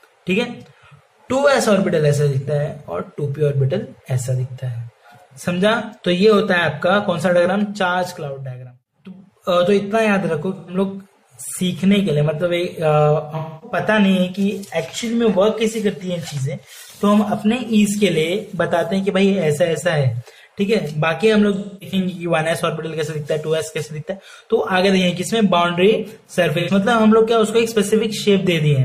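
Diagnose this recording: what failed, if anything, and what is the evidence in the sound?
Codec stage: AAC frame loss with concealment. Smeared, phasey patches at 10.55 to 10.74 s, 13.36 to 13.77 s, 21.55 to 21.96 s and 26.59 to 26.70 s. Missing audio spans 85 to 256 ms, fitting two to six lost frames that the decoder filled from the last good spectrum.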